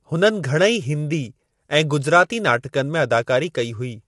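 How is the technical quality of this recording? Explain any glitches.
The recording has clearly audible codec damage throughout. Low-delay AAC compression is the likely cause: its short frames resolve pitch harmonics poorly, so the speech sounds rough and grainy with noise between harmonics. The spectrum stops at 11.5 kHz, which fits AAC-ELD near 32 kbps.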